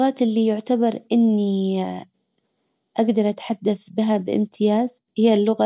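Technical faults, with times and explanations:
No technical faults can be heard in this recording.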